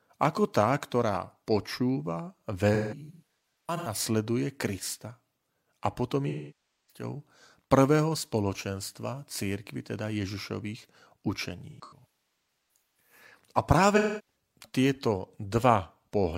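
AAC frame loss with concealment breaks up this speech recording at 2.74–4.00 s, 6.29–7.03 s, 11.70–13.12 s and 13.96–14.35 s. The decoder patches each gap from the last good spectrum with scrambled or interpolated content, so the audio turns smeared, noisy and phasey. The first and third stretches are scattered dropouts totalling about 0.73 s and 0.81 s, with runs up to roughly 150 ms. The other two lose about 0.6 s and 0.3 s.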